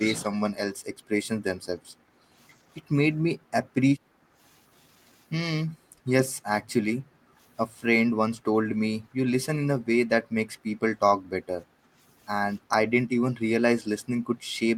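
From 0.0 to 0.3 s the speech dips by roughly 10 dB for a fraction of a second, the pattern of speech suppressed in double talk. The likely cause is an echo canceller that heard far-end audio at the same moment as the local talker and, unable to tell the two apart, pulled down the whole microphone signal, taking the opening of the speech with it.

Background gated by the echo canceller then appears seven times: at 4.12–4.38 s, 5.66–6.06 s, 6.96–7.38 s, 9.02–9.17 s, 9.76–9.88 s, 11.18–11.29 s and 11.65–11.97 s. Each time the room tone falls by about 9 to 10 dB for somewhere between a tenth of a second and 0.4 s, then springs back. The canceller is clamping the microphone while loudspeaker audio plays, so the ambient floor pumps in and out with each far-end burst.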